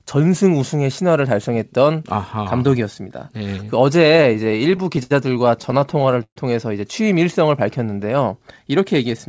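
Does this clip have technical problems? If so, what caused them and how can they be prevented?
Yes. Repeated stalls (stutter) occur from 3.98 to 5.12 s and from 5.62 to 6.38 s. Late packets kept emptying the jitter buffer, so the receiver stretched and faded the last sound, with the longest gap at 129 ms. The audio drags rather than drops. A larger adaptive jitter buffer and a steadier network path would prevent this.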